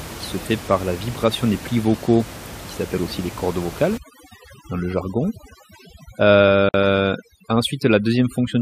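From 3.98 s, just after "aussi les cordes vocales", overdone noise removal takes hold and lasts to the end. The room noise, about 16 dB below the speech, gets pulled so hard that individual frequency bands are cut out whenever they sit near the noise estimate, taking the quieter parts of the voice with them. The background drops and breaks up into twinkling specks. On a spectrogram the background becomes dark with scattered isolated dots, and the speech harmonics look patchy and full of holes.

At 6.69 s a gap at a join of encoded pieces opens: a gap of about 50 ms cuts into continuous speech, left by encoder start-up delay and end-of-piece padding that were not trimmed when separately encoded pieces were joined. It sounds like a brief dropout, after which the sound resumes exactly where it stopped. The waveform shows a flat stretch with smeared edges, and the spectrogram shows a narrow vertical blank band across all frequencies.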